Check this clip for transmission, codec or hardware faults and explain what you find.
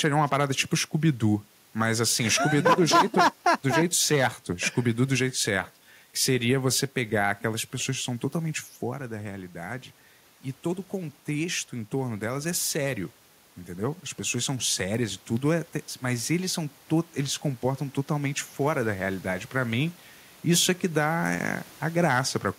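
Two faults are present: a hardware fault in the data path and two gain-control adjustments.

An unreliable data bit runs from 0.41 s to the end. One data line flips at random, adding equal-sized spikes that crackle steadily, even through pauses and over the room noise. On the waveform they appear as uniform-height spikes, and on the spectrogram as broadband speckle.

Automatic gain rising occurs from 6.94 to 9.93 s and again from 10.91 to 15.13 s, each time by about 4 dB. The control sensed a quieter input, about 10 dB lower in the second case, and raised its gain slowly, so voice and background swell together. The waveform envelope and the spectrogram's background rise gradually. The first rise overlaps the talker moving around 8.5 s.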